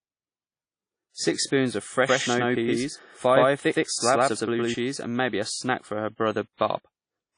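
Throughout the speech there is audible transform-codec damage, likely from WMA compression at a low rate, which fits roughly 32 kbps. Quantisation noise smears across each block, giving a washy, ringing hiss that swells with the voice, and nothing remains above 10.1 kHz.

From 2.06 s, just after "spoons of", to 4.74 s, before "and maybe a snack", the audio has a doubled audio track, likely a second copy mixed in out of step. The full-band duplicate trails by about a tenth of a second at roughly equal level, with no room colour, and it starts and stops abruptly.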